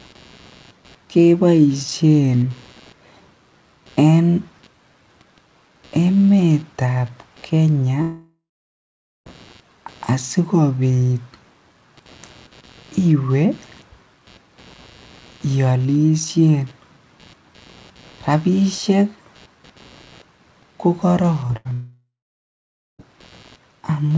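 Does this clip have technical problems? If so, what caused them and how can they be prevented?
Yes. A faint buzzing, pulsing around 150 times a second and roughly 35 dB below the speech, runs through the whole clip and rises and falls independently of the talking. This is computer activity noise: processor, graphics or mouse load shifting the ground shared with the audio circuit. Prevent it with a USB isolator, a ground-loop breaker or a separate audio interface.

From 8.02 to 9.28 s the speech smears into a fading buzz or hiss, then falls to about 0.85 s of near silence, and resumes with about 1.24 s gone. The same happens from 21.73 to 23.01 s, losing about 1.26 s with roughly 0.88 s of silence. This is a long network dropout: the likely cause is that no packets arrived, so the receiver stretched the last sound and then gave up. Prevent it with a more stable connection, preferably wired instead of congested Wi-Fi.

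At 21.48 to 21.51 s there is a brief smear or wobble where 20 ms of audio never reached the decoder in time. This short concealed packet loss was patched by continuing the preceding sound for about 12 ms before blending back into the real signal. Prevent it by reducing network jitter or allowing a slightly deeper jitter buffer.

From 21.57 to 21.67 s the sound turns into a held, fading tail for about 80 ms, and the speech resumes further on with that span missing. This burst of packet loss came from several consecutive packets being lost or arriving too late to play. Prevent it with forward error correction and a less loaded network path.

All of this passed through a G.722 call path at 64 kbps, which leaves nothing above 8 kHz.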